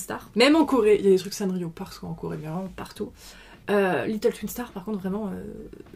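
From 0.66 s to 2.55 s the sound drops flat and slows, running about 6% slow with the pitch lowered by roughly 108 cents, just over a semitone. At 2.55 s it returns to normal speed and pitch. Both shifts begin and end together, which points to a drift correction step: the playback rate was likely altered in a single jump by clock-matching software to rebalance its buffer, then restored once the buffer level recovered.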